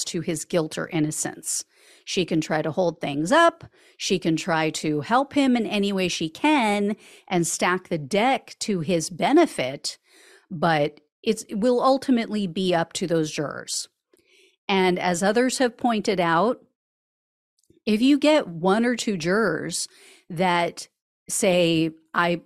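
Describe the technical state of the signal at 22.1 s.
At 22.1 s the speech signal is intact, with no dropout, distortion, clipping or other audible fault.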